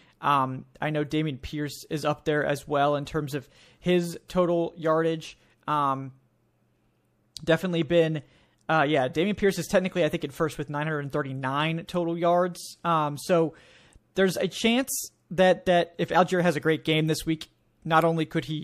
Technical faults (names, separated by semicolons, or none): pre-echo